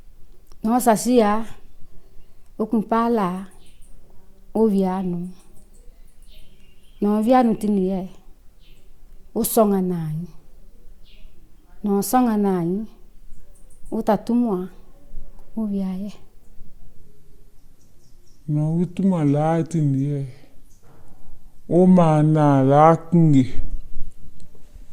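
A section at the wrong speed runs from 16.95 s to the end at 24.93 s. There the audio plays at 0.74 times its proper rate, so everything slows and drops about five semitones at once, most likely from that stretch being fitted to the wrong clock. On a spectrogram every band and harmonic steps down by the same ratio at 16.95 s and stays lower; on the waveform, transients spread out and their spacing widens.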